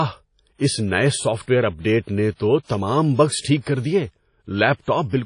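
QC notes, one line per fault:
throughout WMA compression: washy, ringing speech, hiss breathing with the signal, nothing above 10.1 kHz; likely low-bitrate WMA encoding, consistent with 32 kbps.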